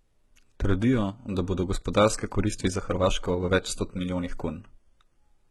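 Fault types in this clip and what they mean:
HE-AAC compression: the speech's treble sounds rebuilt, with s sounds turning gritty and metallic, likely from heavy HE-AAC coding near 16 kbps copying lower bands upward.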